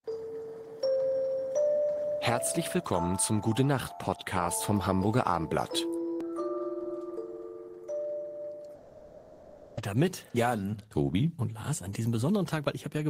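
From 8.75 s to 9.79 s the audio stops progressing. For about 1.02 s the last sound is drawn out as a fading buzz or hiss, with no drop to silence, before the audio resumes further on with that second missing. This is a long network dropout, likely a stall in arriving packets that the receiver papered over by extending what it last had. A brief packet-loss glitch lasts only tens of milliseconds. Here over a second of sound is skipped and never replayed.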